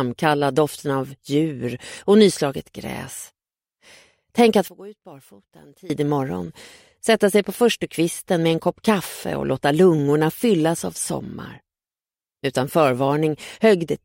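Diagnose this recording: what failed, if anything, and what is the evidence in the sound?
From 4.68 to 5.90 s the sound collapses by about 21 dB to a faint residue. This points to one channel inverted, likely a polarity flip in the analogue wiring, so the centred content cancels when the two sides are summed to mono. A plain gain drop or dropout would leave the whole sound quieter or silent, but here a faint residue survives.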